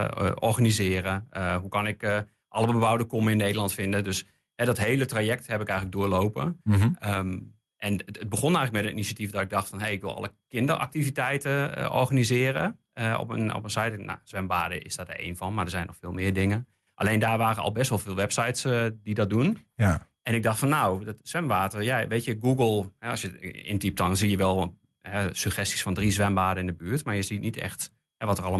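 No technical faults are audible anywhere in this recording.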